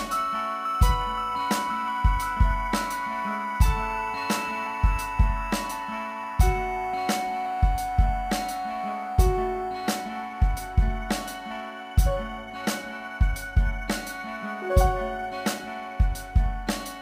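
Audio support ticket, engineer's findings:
Crude rate conversion, whole clip: gritty inharmonic fizz tracking loud and high-frequency content, roughly 25 dB below the sound. Nearest-sample repeats, no filtering; fits 44.1 to 48 kHz. Unlike clipping, the fizz is not harmonic and persists at moderate levels.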